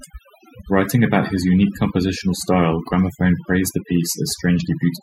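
A speech recording runs through all its length with overdone noise removal: a noise reduction stage set far too aggressively has switched off individual frequency bands whenever their level sat near its noise estimate, taking the quieter parts of the voice with them. The background drops to near silence sprinkled with twinkling specks. A spectrogram shows scattered isolated dots in the gaps and ragged, holed harmonics; the waveform's pauses sit almost flat.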